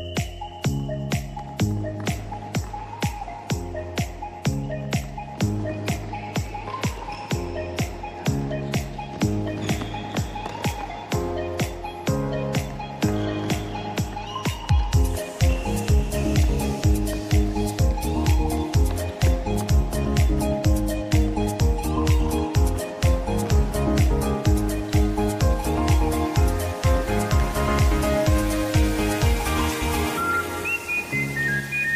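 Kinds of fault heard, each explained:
No kinds of fault are heard in this clip.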